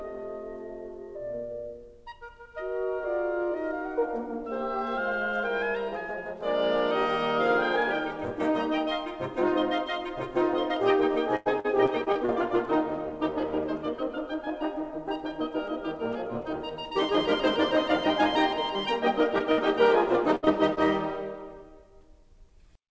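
Repeated packet loss (robotic sound) runs from 11.36 to 12.30 s. Six separate gaps are patched by extending the last sound, the longest 96 ms, so about a quarter of that stretch is filled in. The music turns choppy, with pieces missing.

Short concealed packet loss appears at 19.38 to 19.42 s, 20.45 to 20.49 s and 20.75 to 20.79 s. Each time about 20 ms fails to arrive and the receiver bridges it by continuing the preceding sound. Each one is a brief smear or wobble in the music.

A burst of packet loss hits at 19.52 to 19.59 s and again at 20.35 to 20.45 s, each dropping about 60 ms in a row. The last sound is held and faded across the hole, giving a short buzz or hiss before the music resumes further along. It is heard through a G.722 call path with nothing above 8 kHz.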